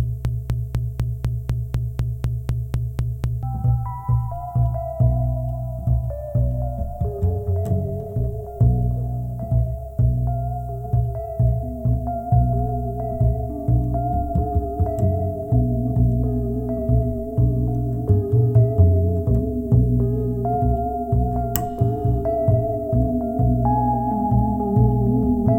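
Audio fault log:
0.00–3.43 s broken-record loop, already running at start: a 0.25 s fragment repeats 13 times back to back, likely a stalled stream resending its last buffer.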